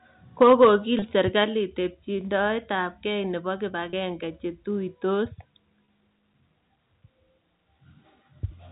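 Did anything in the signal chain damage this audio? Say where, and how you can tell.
Yes. At the converter, likely microphone overload: peaks run about 5 dB over full scale at 0.41–0.69 s and about 1 dB at 1.39–1.41 s, flattened into a harsh crackle.

In call processing, the microphone volume was stepped down, likely by automatic gain control, dropping the level abruptly by about 2 dB at 0.43 s and about 4 dB at 1.44 s, before "tebchindoetabkeey nebo".

On the network, packet loss with pitch repetition: 30 ms gaps at 0.99, 3.90 and 5.85 s (after "che tuitos") are bridged by repeating the last pitch period, a brief buzzy held tone.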